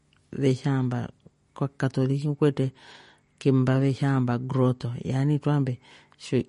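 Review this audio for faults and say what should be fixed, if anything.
MP3 compression, throughout the clip: the speech is cut off sharply above 10.5 kHz and carries a plainly audible watery, swirling texture, with sibilants turning metallic. This is likely the work of an MP3 encoder starved of bits. The damage fits a low bitrate of around 40 kbps, so it dropped the top of the spectrum at a fixed point and discarded weaker frequency lines that flicker in and out between frames. Keep a lossless or higher-bitrate copy from the source and encode from that.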